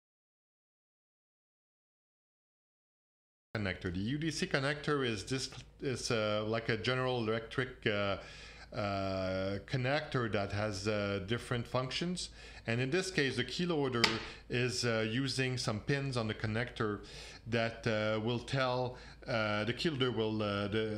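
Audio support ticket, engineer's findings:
Audio dropout to silence, 0.0 to 3.55 s. Already under way when the clip begins. Silence, no room tone underneath. Sound then cuts in abruptly. Likely input loss upstream, such as a disconnected device, failed link or mute, with silence written meanwhile.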